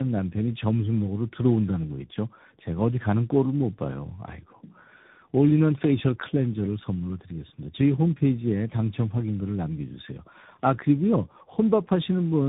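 Speech, with tandem speech coding throughout: the roughness, muffling and warble point to three speech coders in sequence, likely AMR-NB twice then G.726, each re-coding the last one's errors. A spectrogram shows nothing above 3.8 kHz and smeared, flickering harmonics.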